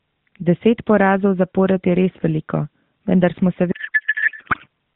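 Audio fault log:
3.72–4.67 s, codec payload misread: the speech abruptly turns into garbled, warbling noise that barely tracks it. The AMR-NB stream's octet-aligned frames are being unpacked as bandwidth-efficient, so every field lands in the wrong place until the end of the fault.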